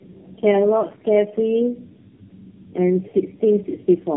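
Throughout the speech, the call appears to have passed through several low-rate speech codecs in series, which is tandem speech coding. The character suggests about three AMR-NB stages at narrowband rates of roughly 6 to 8 kbit/s, joined by ordinary telephone links. Each encoder had to model sound already mangled by the one before, so the errors compounded. The voice comes out rough, muffled and warbly, with nothing above 3.7 kHz.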